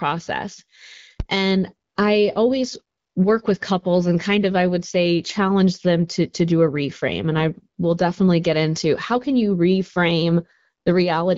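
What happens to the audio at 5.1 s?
Nothing goes wrong at 5.1 s: the speech carries on intact, passing through the AMR wideband (HD Voice) codec at 12.65 kbit/s.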